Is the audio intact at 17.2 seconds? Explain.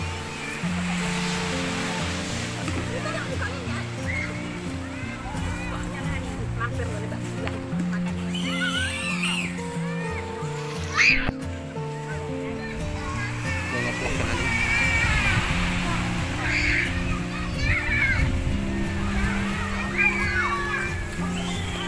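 Yes, at 17.2 seconds the audio runs intact, with no dropout, click, distortion or other fault at that point.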